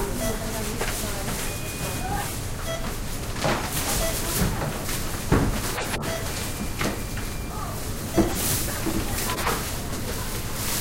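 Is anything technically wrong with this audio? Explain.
Yes. Corrupt frames were decoded at 2.08–2.40 s, 5.74–6.05 s, 8.30–8.39 s and 9.32–9.49 s. Damaged frames were played anyway, so wrong gains put energy at wrong frequencies, giving brief chirps, squeaks, blips or noisy bursts over the sound. The one near 5.7 s is loudest, peaking around -5 dBFS.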